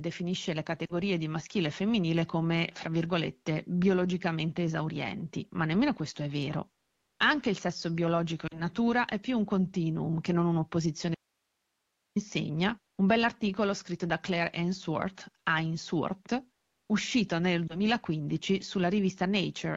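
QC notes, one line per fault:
0.86–0.93 s, lost AMR speech frames: a brief warble and dip just before "di maschile e femminile", as the decoder bridged about 40 ms of frames that failed their checksum.
8.47–8.62 s, lost AMR speech frames: a short smeared wobble with a quick loss of level, the decoder repeating earlier pitch and vocal tract settings across about 40 ms of missing frames.
11.15–12.16 s, audio dropout to a faint residue: the speech cuts off abruptly, leaving only hiss roughly 50 dB down for about a second before "insegna un bell'articolo scritto"; a likely loss of the signal while the path stayed live.
17.68–17.80 s, lost AMR speech frames: after "uscito nel", a single 20 ms frame gap gives a quick dip as the decoder conceals it and recovers.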